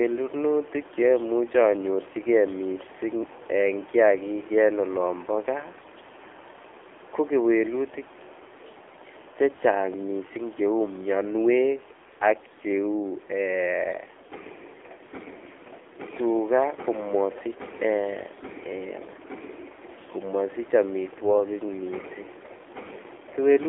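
AMR narrowband mobile codec, throughout: the speech passes through a narrow phone-style band of about 300 Hz to 3.5 kHz, and its low bit budget, which fits the 7.4 kbps mode, leaves plainly audible buzzy, synthetic coloration from the coarsely modelled vocal tract.

AMR bit errors, from 5.78 to 5.88 s: over this brief stretch, consistent with about five damaged 20 ms frames, flipped bits at around a 5 percent rate misplace the excitation pulses and skew the finer parameters, so the speech briefly turns scratchy and gargly while keeping its pitch.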